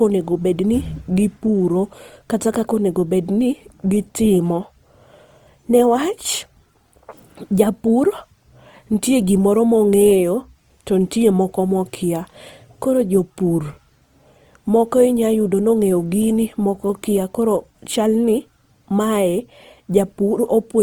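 All the way through the speech there's Opus compression, and it's plainly audible. The texture points to the codec's CELT music mode squeezed to something like 24 kbps, which is likely what did it. With that few bits, the encoder keeps each band's energy but fills the detail by folding lower bands or padding with noise. So instead of swirly holes you get a grainy, rough, noisy edge on the voice, even though the bandwidth still reaches about 20.2 kHz.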